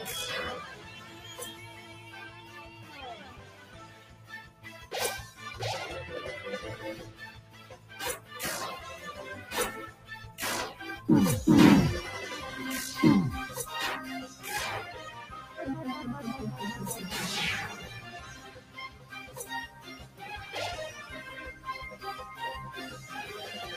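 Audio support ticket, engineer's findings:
Noise suppressor applied to music or sounds, whole clip. Speech-tuned suppressor left in the chain. Treats steady tones, ambience and reverb as noise. Level swings of around 15 dB. Attacks pass. Held sound and tails sink. Result is pumping and a thinned, fluttering texture. Probable component: speech noise suppression stage. Fix: bypass for non-speech content.

Sound cut by the noise suppressor. Six spans: 0.64–4.9 s (drop about 10 dB, roughly four seconds affected), 7.08–7.94 s (about 10 dB), 9.9–10.38 s (about 9 dB), 15.41–15.58 s (about 7 dB, brief), 18.04–19.37 s (about 9 dB), 19.67–20.22 s (about 9 dB). Sustained material misread as noise. Decays cut short. Same suppressor stage.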